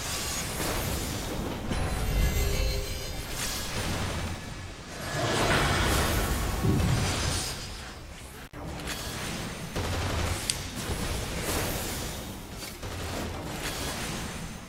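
Intermittent contact at 8.47 to 8.54 s: a loose cable or plug briefly loses its connection, so the signal path opens for about 58 ms before the conductors touch again. The sound drops out abruptly, with a short burst of crackle at each edge where the contact scrapes open and then closed. During the gap, faint hiss remains before the audio snaps back.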